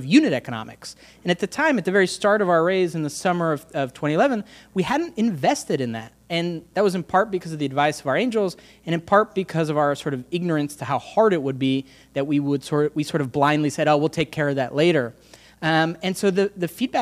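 No technical faults are audible in this audio.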